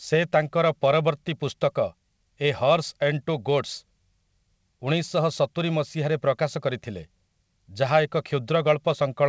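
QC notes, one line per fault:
No faults found in this speech clip. The audio came through a WebRTC call path, and nothing is heard above 8 kHz, which fits a wideband call codec such as G.722.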